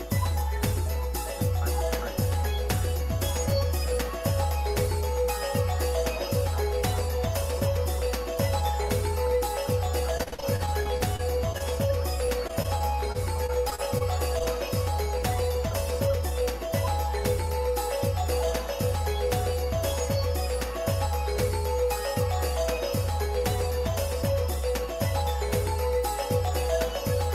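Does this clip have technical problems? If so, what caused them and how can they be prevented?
Yes. From 10.17 to 11.62 s and again from 12.26 to 14.02 s the sound turns choppy and robotic. This is repeated packet loss: holes arrive one after another (12 in the first stretch, 11 in the second) and each is patched by extending the preceding sound. The longest holes are 41 ms and 29 ms, and about 21% and 11% of each stretch is synthetic. On a spectrogram the harmonics turn smeared and blocky, with short flat or repeated segments. In the waveform, copied cycles sit between abrupt level changes. Prevention: improve the network path, for example by using wired connections, reducing competing traffic and applying QoS marking, and enable forward error correction so that bursts of lost packets can be rebuilt.

At 14.38–14.42 s there is a brief smear from short concealed packet loss. About 20 ms of audio never arrived in time, and the receiver bridged the gap by continuing the last sound before blending back into the real signal. 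On a spectrogram this appears as a thin vertical band where fine detail blurs or a transient is missing, and the waveform shows a repeated cycle followed by a slight seam. Prevention: use redundancy or in-band FEC so that a single lost packet can be recovered instead of guessed.

From 15.70 to 16.42 s the audio sounds hurried at an unchanged pitch. This is a jitter buffer speed-up: after delayed packets arrived together, the buffer held too much audio, so the receiver trimmed pitch-period-sized pieces, around 70 ms in total, to run at 107% speed. The spectrogram shows events bunched slightly closer in time with harmonics at the same height, and the waveform has small splice points where cycles were removed. Prevention: reduce network jitter and tune the adaptive buffer so that it drains more gently.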